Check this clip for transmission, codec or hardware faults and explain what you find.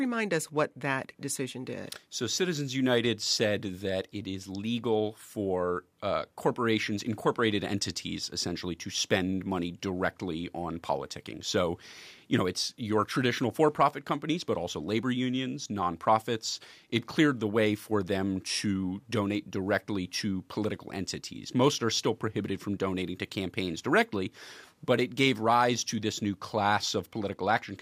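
No faults can be heard anywhere in this speech recording.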